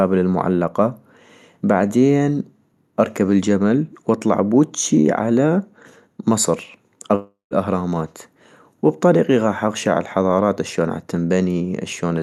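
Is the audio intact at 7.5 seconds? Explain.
No. From 7.15 to 7.54 s a long network dropout leaves a gap, likely from lost packets: the last sound is stretched into a fading buzz, then falls to near silence. On a spectrogram, smeared flat bands dissolve into an empty stretch before the speech resumes.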